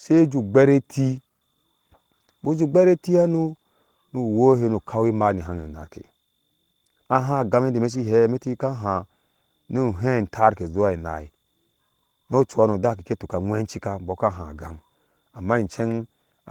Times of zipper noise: none

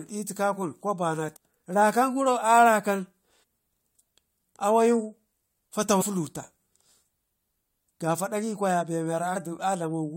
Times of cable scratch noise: none

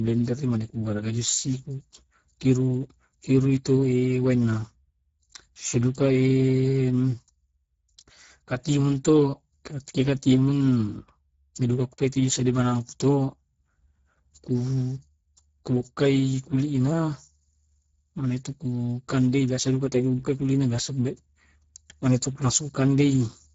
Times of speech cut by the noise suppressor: none

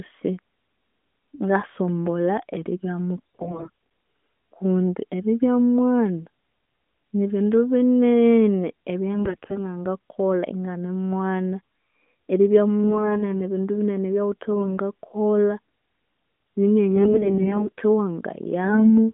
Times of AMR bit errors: 3.17-3.86, 9.15-9.61, 12.84-13.29, 14.52-14.78, 16.96-17.81, 18.64-18.98

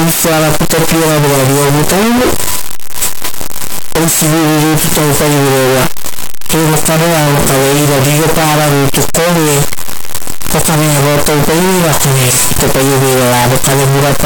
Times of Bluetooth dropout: none

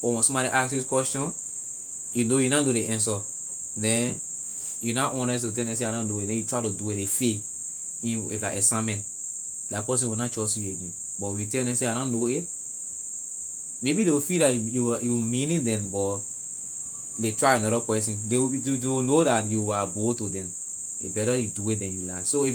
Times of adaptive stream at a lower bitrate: none

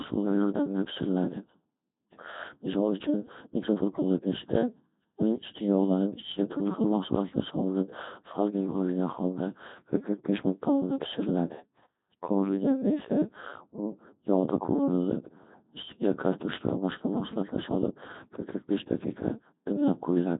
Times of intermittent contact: none

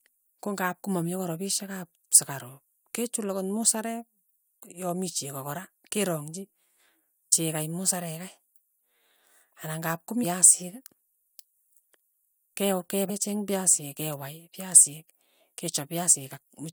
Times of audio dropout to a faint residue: none

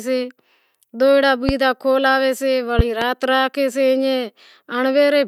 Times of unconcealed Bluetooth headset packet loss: none

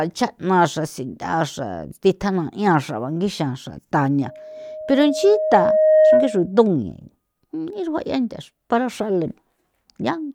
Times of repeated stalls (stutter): none

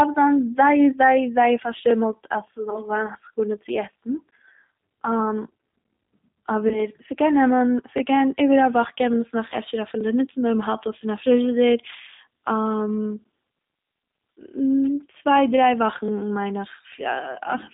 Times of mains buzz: none

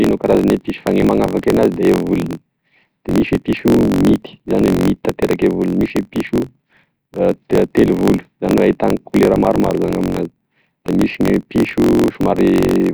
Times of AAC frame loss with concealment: none

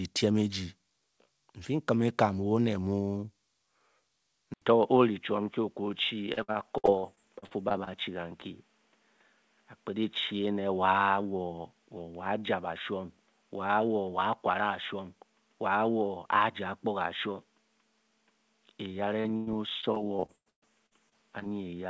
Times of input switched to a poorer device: 4.54-21.90

